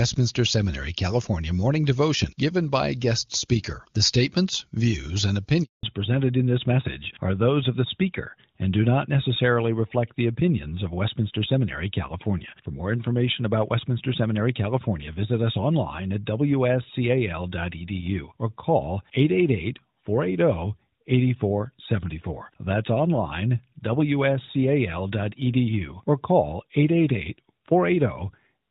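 A handover gap runs from 5.63 to 5.83 s: while the call was being passed from one network to another, no speech frames got through for about 200 ms, so the speech cuts off almost at once and that stretch is simply missing.

Fallback to narrowband follows at 5.83 s and lasts to the end. Before this point the HD Voice wideband codec carries the speech cleanly. After it, nothing above 4 kHz survives, consistent with a drop to AMR-NB at around 12.2 kbit/s, leaving the voice duller and rougher.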